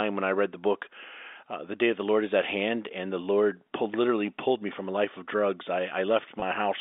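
At 6.40 to 6.42 s there is packet loss with pitch repetition. About 20 ms of audio went missing, which fits a single lost packet. The receiver bridged the gap by repeating the last pitch period. It sounds like a brief, slightly held buzz over the band-limited telephone sound.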